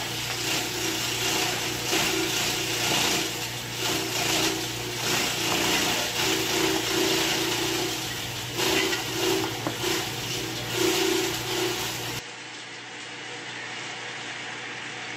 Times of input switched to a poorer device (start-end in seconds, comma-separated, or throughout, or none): 12.19-15.16